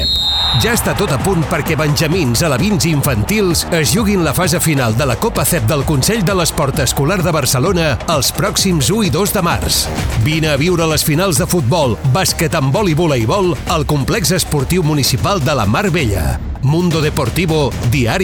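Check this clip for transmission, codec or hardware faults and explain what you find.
No faults are audible.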